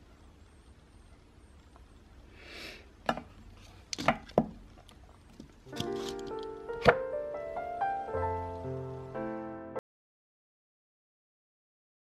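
At 9.79 s the sound cuts off abruptly mid-flow and stays silent through to the end, about 2.2 s later. This audio dropout to silence likely comes from the input being lost while writing continued. Unlike a fade-out or noise gate, no room tone survives.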